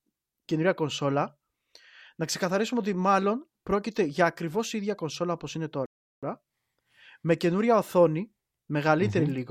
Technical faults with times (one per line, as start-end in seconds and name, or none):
5.86-6.23 playback stall